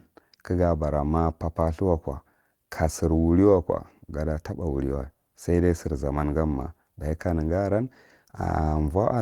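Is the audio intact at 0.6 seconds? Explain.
Yes, the audio is intact at 0.6 seconds, with no audible fault at that moment.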